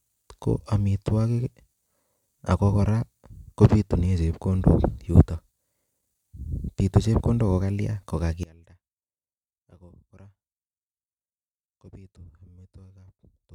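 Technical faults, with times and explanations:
8.43–13.54 s, one channel inverted: after "bitu chepkondok ko kalya" the speech drops about 25 dB to a faint trace, likely polarity reversal cancelling the shared centre content in mono.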